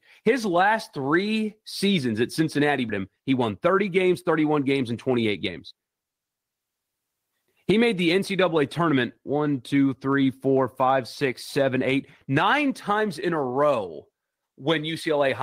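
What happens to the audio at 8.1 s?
Nothing goes wrong at 8.1 s; the speech runs through that moment intact, with no dropout, click or distortion.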